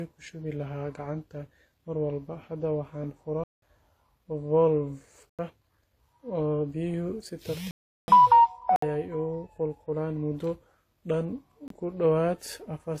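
Throughout the speech, nothing is present above about 14.9 kHz, and two distinct kinds of coding artefact sit on top of each other. The likely cause is transcoding between lossy codecs, with a low-rate HE-AAC pass followed by WMA. A single codec pass would not leave mixed artefact types like these.

Blocks of digital silence occur at 3.44–3.62 s (186 ms), 5.29–5.39 s (93 ms), 7.71–8.08 s (372 ms), 8.76–8.82 s (63 ms) and 11.68–11.70 s (24 ms). Each cuts to silence and back with no fade. That hard cut distinguishes them from a fade or level dropout. The three longer gaps fit buffers of 8192, 4096 and 16384 samples.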